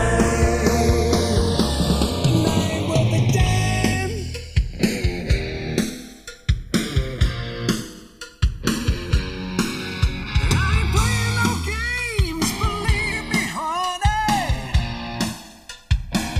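From start to finish, the channels are drifting apart. The two sides seem to come from devices on separate clocks, mismatched by tens of parts per million. Their offset creeps toward about a millisecond. Summed to mono, comb notches sweep slowly, giving a slow flanging.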